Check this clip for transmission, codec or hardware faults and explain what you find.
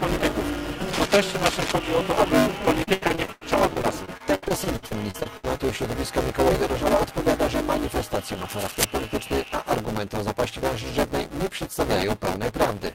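Three faults are present: buffer tearing through the whole clip, two bursts of cable scratch noise, and a stretch of repeated packet loss with robotic sound.

Buffer tearing runs from start to finish as a steady buzz at 200 Hz, which points to a playback buffer of about 5 ms. The writing side and the reading side have drifted out of step, so in every buffer period a bit under half of the output is stale audio from roughly 10 ms earlier. Hard joins on both sides of that stale section repeat at the buffer rate and produce the rattle, which follows the signal and stops when it stops.

Cable scratch noise appears from 0.86 to 1.74 s and again from 8.48 to 8.84 s. Each time, dense and irregular crackling sits over the audio, only a few dB below the signal. The likely cause is a worn cable, connector or control being moved, so that its contact resistance jumps around quickly and modulates the signal with noisy bursts.

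Repeated packet loss with robotic sound occupies 2.83 to 5.62 s. There are 21 gaps in that span. About 0.75 s of missing audio was patched by extending the preceding sound, and the longest single gap is 93 ms. Concealment covers 27% of the span, and because the gaps follow each other so closely, the audio turns choppy, with pieces dropping out.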